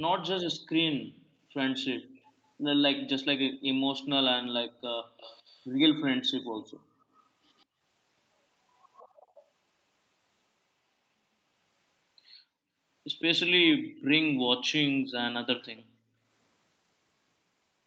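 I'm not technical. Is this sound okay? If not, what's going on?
No. Around 2.01 to 2.17, 4.71 to 4.83 and 5.02 to 5.17 seconds the room sound briefly drops away: background gated by the echo canceller, which turned the microphone down hard.

At 2.17 to 2.21, 5.17 to 5.66, 7.58 to 7.65 and 9.21 to 9.45 seconds there is a faint repeat of the speech about 0.15 seconds late. This is likely echo leak from a loudspeaker the canceller missed.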